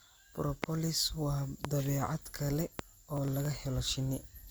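Speech with three loud pops, at 0.64–0.66 s, 1.65–1.67 s and 2.79–2.81 s, each a single sharp pulse about 20 to 25 dB above the speech, which carries on underneath. These are likely voltage steps from a plug, switch, static or driver glitch. They differ from crackle in being isolated transients added on top, with nothing missing from the audio. Processor overload crackle follows from 3.17 to 3.45 s: several very short buffers, under a millisecond each, were skipped outright, leaving hard-edged gaps that tear through the sound as a gritty burst rather than one clean pop.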